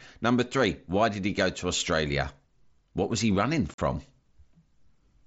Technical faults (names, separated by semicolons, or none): unconcealed Bluetooth headset packet loss